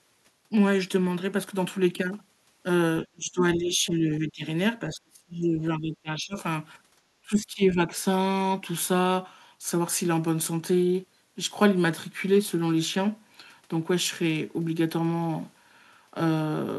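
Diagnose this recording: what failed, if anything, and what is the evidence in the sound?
The call processing stage likely failed, with speech suppressed in double talk: the echo canceller, faced with both ends talking at once, could not separate this talker from loudspeaker echo and turned the level down. The speech dips sharply from 3.05 to 4.44 s by around 20 dB, sinks further from 4.86 to 6.36 s at roughly 30 dB, and drops again more shallowly from 7.22 to 7.92 s by about 15 dB.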